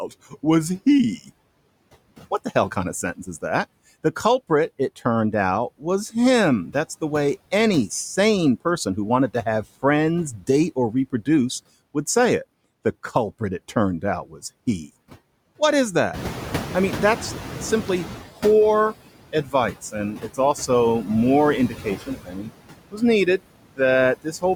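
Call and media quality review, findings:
Noise suppressor artifacts, whole clip. Noise pumped down by about 17 dB, dips between words and creeps back under them. That's the suppressor gating bands frame by frame against its steady-noise estimate. Worth checking its aggressiveness setting.

Noise suppressor catching up, 16.13 to 18.24 s. Room noise jumps about 16 dB near 16 s. The suppressor initially takes only about 10 dB off, so the noise comes through with less reduction. It then sinks over roughly 2.1 s as the noise estimate adapts. The room noise itself is just the environment and sits about 12 dB under the speech after the jump.

Speech cut by the noise suppressor, four spots:
19.33 to 19.54 s, about 12 dB down, roughly 0.1 s affected.
20.16 to 20.39 s, just before "also more", about 12 dB, roughly 0.1 s.
21.69 to 22.5 s, right after "also more", about 15 dB, nearly half a second swallowed.
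22.91 to 23.02 s, about 16 dB, a brief dip.

Suppressor classed quiet speech as noise post-rise and turned it down with the background.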